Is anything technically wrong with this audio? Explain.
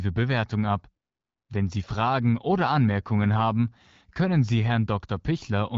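No, nothing in this speech clip points to a technical fault. It has passed through the AMR wideband (HD Voice) codec at 12.65 kbit/s, a rate at which the speech stays clear, with only light coding marks and the top band above 6.4 kHz filled in with shaped noise up to 7 kHz.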